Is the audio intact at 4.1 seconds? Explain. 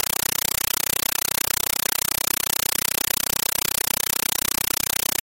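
No. At 4.1 s, as through the whole clip, a compressed stream is played as audio: an undecoded AC-3 bitstream is read as raw samples, so harsh 8 ms noise bursts repeat 31.25 times a second. That rigid chatter with silent gaps, rather than continuous hiss, sets it apart.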